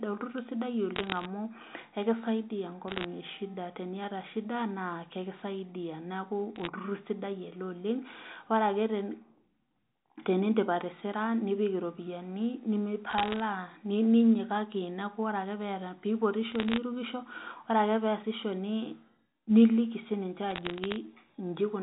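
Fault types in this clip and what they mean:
Bit errors on a digital phone line: Flipped bits each corrupt one 8-bit telephone sample. Hits on the sign or upper bits give sharp ticks. Short bursts of crackle sit over the speech at 0.96, 2.88, 6.56, 13.1, 16.52 and 20.5 s, with well under one percent of bits wrong.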